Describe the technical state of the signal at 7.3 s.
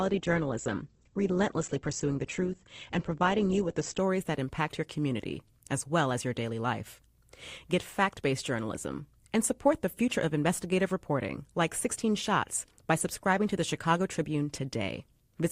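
At 7.3 s the speech signal is intact, with no dropout, click, distortion or other fault audible at that point.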